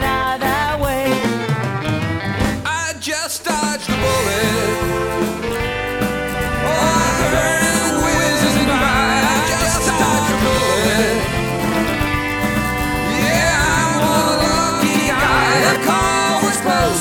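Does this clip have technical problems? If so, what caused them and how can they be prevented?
Yes. From 6.34 s to 15.76 s the sound is doubled: a second, equally loud copy trails the original by about 150 ms, giving a slapback smear with no reverberant tail. It appears and vanishes abruptly at those points. This is a doubled audio track, most likely from the same signal being captured twice, once through a slower monitoring or loopback route. To prevent it, route each source to the recorder through only one path.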